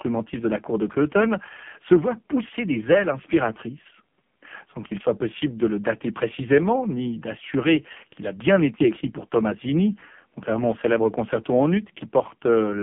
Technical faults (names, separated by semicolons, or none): AMR narrowband mobile codec